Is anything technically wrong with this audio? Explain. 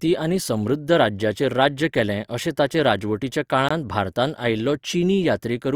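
Yes. At 3.69 to 3.71 s the speech drops into a block of digital silence lasting 20 ms. A stretch of samples was zeroed, likely because the output buffer wasn't filled in time. The cut is abrupt at both edges, leaving a tiny hole. Unlike a fade-out or concealed packet loss, nothing is smoothed or filled in. The signal simply stops and restarts.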